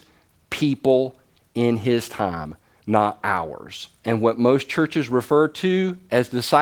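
No technical faults can be heard in this speech.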